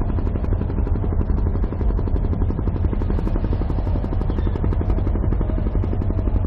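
Damaged data in a compressed stream produces brief blips at 1.82–1.84 s and 5.86–5.88 s in this sound recording: corrupted frames knock the decoder out of sync until it finds a valid frame header.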